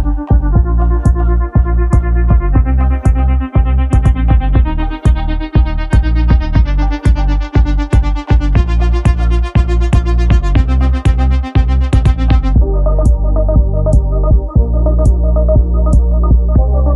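No technical faults are audible anywhere in the clip.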